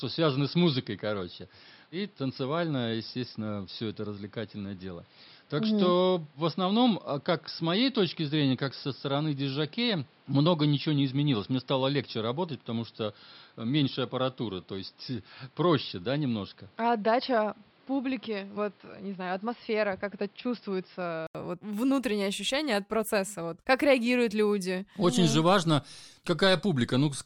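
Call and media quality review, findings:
Input switched to a poorer device, 0.0 to 21.35 s: speech dull and boxy, nothing above 5.4 kHz, roughly 5 dB quieter, with its own background noise sitting roughly 35 dB below the speech. Short gap of about 80 ms at 21.35 s, then full band returns right before "вот внутреннее ощущение от". Likely cause is the capture path running on a narrowband mic or headset call profile, then switching back to the proper mic.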